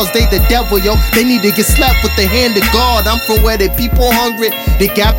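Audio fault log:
throughout switching supply whistle: a switching power supply running at an audible rate leaks a thin high whistle, wandering between about 13.9 and 14.1 kHz, roughly 20 dB below the sound.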